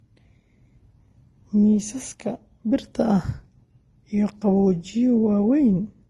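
Speech, with nothing above 12 kHz and the artefacts of two codecs layered together throughout. This is likely transcoding between lossy codecs, consistent with a low-bitrate Vorbis encode around 29 kbit/s re-encoded to Opus near 32 kbit/s, each stage stacking its own artefacts.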